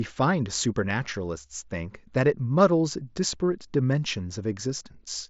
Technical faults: none

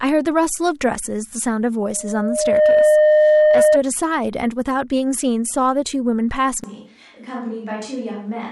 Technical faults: loudspeaker feedback squeal; switch to a distant microphone

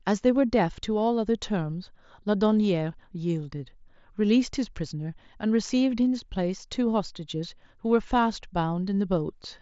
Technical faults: none

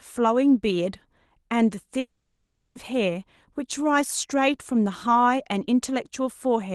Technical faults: long network dropout

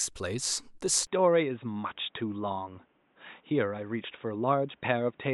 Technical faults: input switched to a poorer device

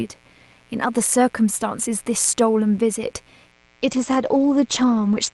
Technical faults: mains buzz; call bitrate drop

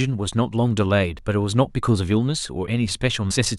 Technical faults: damaged data in a compressed stream

